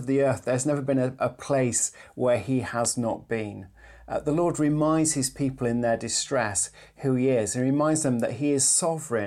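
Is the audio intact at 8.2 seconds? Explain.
Yes, the audio is intact at 8.2 seconds, with no fault of any kind at that point.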